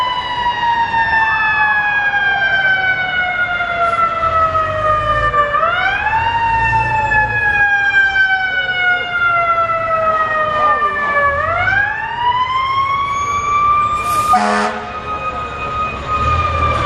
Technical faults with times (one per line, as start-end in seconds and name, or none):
none